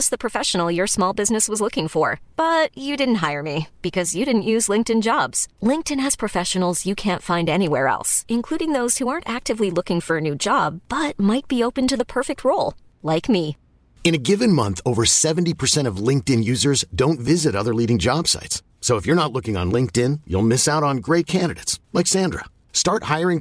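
No technical faults can be heard anywhere in the speech; the signal holds steady throughout.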